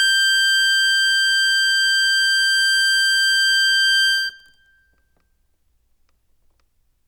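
Listening to this music, nothing stood out as a technical problem at any point.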